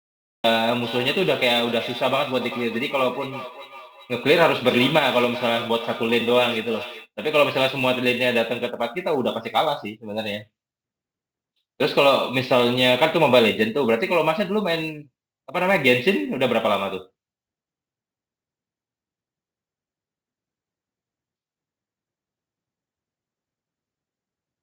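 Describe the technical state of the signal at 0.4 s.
At 0.4 s the signal is still in a cut-off start: digital silence from 0.0 s until the sound begins abruptly at 0.44 s, mid-speech, with no attack. The waveform shows a flat line, then a sudden jump; the spectrogram shows a blank region ending in a hard vertical edge.

Sample clock jitter, from an unstable converter clock of a few microseconds, affects the whole clip. It stays inaudible in this silence, then appears as hiss about 25 dB below the speech, visible as a diffuse high-frequency haze.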